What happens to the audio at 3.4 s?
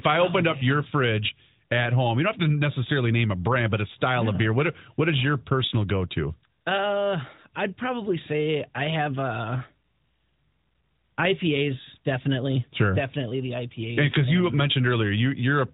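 Nothing goes wrong at 3.4 s: the speech runs through that moment intact, with no dropout, click or distortion, only the band-limited, phone-like character of the AMR narrowband mobile codec carrying it.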